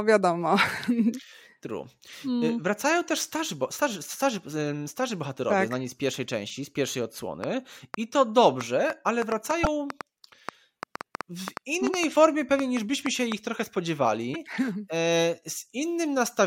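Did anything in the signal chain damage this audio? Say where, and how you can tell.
Yes. A train of clicks runs from 7.44 to 13.33 s: roughly 30 similar pops at an irregular 4.2 per second, peaking about 10 dB above the sound and audible in the pauses too. This is likely interference or a struggling interface at the analogue wiring or converter stage, injecting pulses.

A broken MP3 bit reservoir appears at 9.63–9.66, 12.14–12.16 and 14.33–14.36 s. Each is a brief chirp or hole lasting about one 26.1 ms frame, with the audio jumping ahead. This likely happens at the codec or storage stage: frames were lost, so the next frame pulled borrowed data from the wrong bytes.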